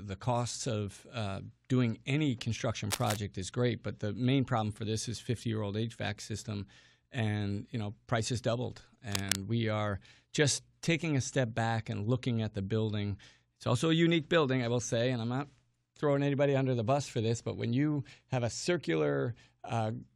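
Brief bursts of scratchy, rustling noise sit over the speech from 2.90 to 3.16 s and again from 9.09 to 9.36 s, only a little below the speech level. This cable scratch noise is likely from a worn cable or connector being moved, its contact resistance fluctuating rapidly.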